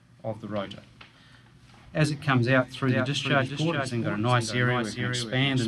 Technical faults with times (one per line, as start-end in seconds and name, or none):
2.89-5.67 doubled audio track